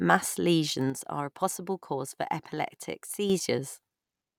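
One channel drops out from 0.90 s to 3.30 s. For about 2.4 s the speech suddenly sits about 6 dB quieter, then snaps back to full level. The likely cause is that one side of a stereo feed went silent before the two channels were summed to mono. Material shared by both sides then comes from only one, halving its contribution, and anything carried only by the missing side vanishes until the channel returns.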